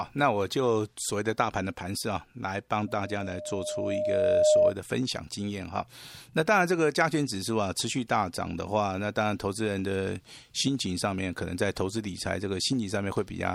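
Loudspeaker feedback squeal from 2.87 to 4.75 s: the microphone re-amplifies its own loudspeaker, and a 609 Hz tone swells over roughly a second and a half, ending about 10 dB above the speech.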